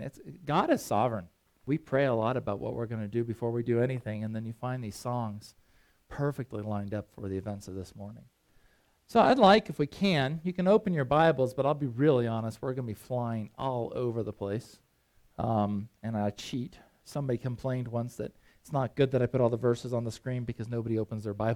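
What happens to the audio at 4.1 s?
Nothing goes wrong at 4.1 s; the audio plays through that moment intact.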